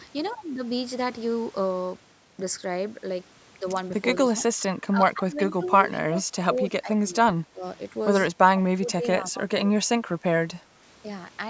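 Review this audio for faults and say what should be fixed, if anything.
Speech suppressed in double talk at 4.55 to 5.61 s, 6.07 to 6.25 s, 6.6 to 7.64 s and 8.59 to 9.84 s: the speech level sags by roughly 15 to 20 dB in patches, around half a second of each longer stretch and a brief dip in the short one. The likely cause is an echo canceller that, with both ends talking at once, could not tell the near talker from loudspeaker echo and attenuated everything. A canceller with better double-talk detection, or a headset at the near end, would prevent it.

Echo leak at 5.65 to 5.98 s: a faint delayed copy of the speech, about 25 dB below it, trails the original by 183 ms. That delay points to sound from the other side's loudspeaker reaching its microphone and likely surviving incomplete echo cancellation before being sent back, arriving as a brief scrap. The band topping out at 8 kHz is ordinary call microphone processing. 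Tuning the far-end canceller or using a headset would prevent it.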